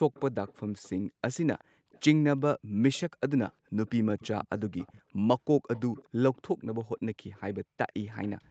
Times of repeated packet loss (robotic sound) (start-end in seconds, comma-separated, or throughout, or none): none